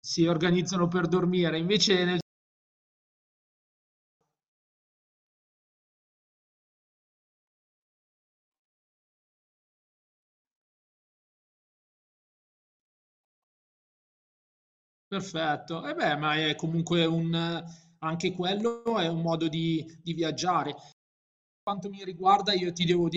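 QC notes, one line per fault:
2.21–4.21 s playback stall: the speech cuts to silence for 2 s mid-flow, then resumes; the player likely ran short of buffered data.
20.92–21.67 s playback stall: the speech drops out for about 0.75 s before continuing, likely because the playback thread was briefly blocked or starved of data.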